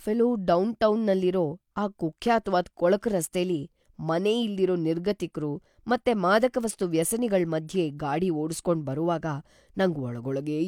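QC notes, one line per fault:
No fault to note in this speech clip.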